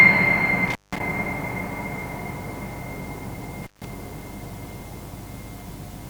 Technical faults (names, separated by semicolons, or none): intermittent contact